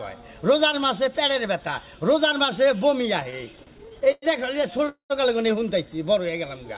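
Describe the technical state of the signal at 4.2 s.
At 4.2 s, packets arriving late kept emptying the jitter buffer, causing repeated stalls (stutter) from 3.2 to 4.25 s. The receiver stretched the last sound through sixteen gaps, up to 107 ms, so the audio drags and stutters without losing anything.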